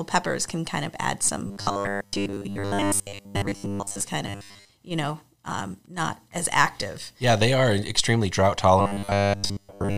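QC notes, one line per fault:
1.47–4.02 s, robotic sound from repeated short buffers: right after "can kind of add" the speech becomes a rigid, metallic 100 Hz buzz that only loosely tracks the words. The likely cause is a 10 ms stretch being replayed in place of missing audio, with most of the real signal skipped.
4.27–4.71 s, robotic sound from repeated short buffers: a brief return of the same 100 Hz mechanical drone just before "you know um not". A 10 ms block is likely looping while fresh audio fails to arrive in time.
8.80–9.98 s, robotic sound from repeated short buffers: following "they are extremely drought", the speech turns buzzy and metallic at a fixed 100 Hz until the end. This is likely repeated 10 ms buffers replacing most of the incoming audio.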